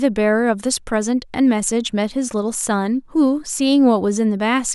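No audible technical faults were found anywhere in the speech recording.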